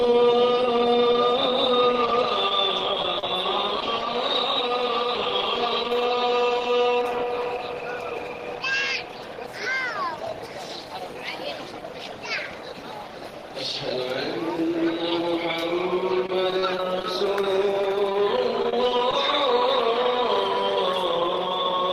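Short concealed packet loss occurs at 2.49–2.51 s, 3.02–3.04 s and 3.19–3.23 s: brief holes of 10 to 30 ms, patched by extending the preceding sound, heard as tiny smears. A spectrogram shows short, overly smooth patches where detail briefly freezes.

Repeated packet loss (robotic sound) follows from 16.26 to 17.05 s, with seven gaps of up to 26 ms. The stream keeps dropping, and each hole is filled by continuing the last sound. The result is choppy, and in the waveform the envelope looks repetitive and stuttering.

Another short concealed packet loss appears at 17.42–17.44 s, a single 10 ms fill heard as a brief wobble.

A second stretch of repeated packet loss (robotic sound) runs from 17.82 to 19.13 s, with eleven gaps of up to 26 ms. Roughly a tenth of that span is concealment, heard as a choppy texture and seen as a comb of smeared, frozen slices across the spectrogram.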